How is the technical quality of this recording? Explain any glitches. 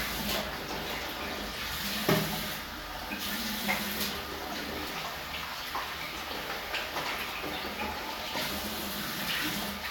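No glitches or technical faults can be heard anywhere in this recording of sounds.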